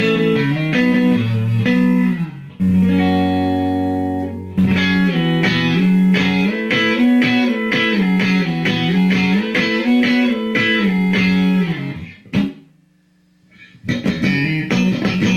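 Nothing goes wrong anywhere in this audio; there's no glitch, dropout or hiccup to point to at any moment.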